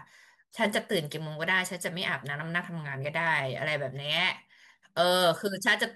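A speech recording, and nothing is technically wrong with it.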